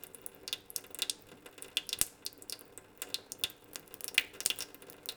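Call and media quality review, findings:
Sample clock jitter, 3.69 s to end: hiss and roughness that track level and high content. Unstable converter clock, around 10 µs rms, error only about 10 dB below the signal.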